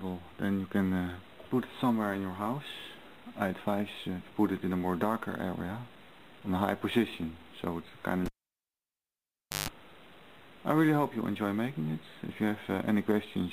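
A cable pulled and plugged in back in at 8.26 s: a pop, 1.38 s near-silence, 50 Hz mains buzz for 0.15 s, pop at 9.69 s, showing as vertical clicks bracketing a flat gap and low hum lines.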